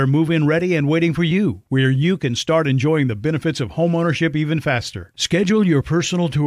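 No technical fault can be heard anywhere in this speech recording.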